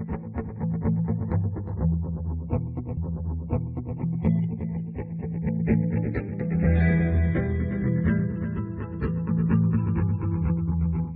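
Throughout the clip, the two channels were captured by devices running on separate clocks, a mismatch of around 70 ppm, so the delay between them creeps steadily and reaches about 1 ms by the end. Once the channels are summed to mono, that sliding offset produces comb-filter notches that move slowly across the spectrum. The result is a channels drifting apart fault, heard as a gradual flanging sweep colouring the whole recording.

From 2.96 s to 3.96 s, the player fetched or queued the same stretch of the stream twice, a stream segment repeated fault that adds about 1.0 s to the playback. At 3.96 s the audio jumps back and replays that second of material before moving on. A small blip marks the point where playback leaps backward.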